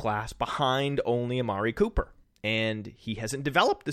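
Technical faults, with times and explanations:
No technical faults can be heard in this speech recording, and the signal holds steady with nothing breaking into it.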